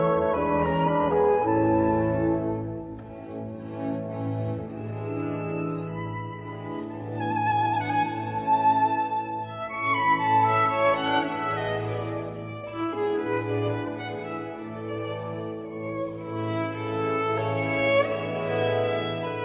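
No technical faults are audible.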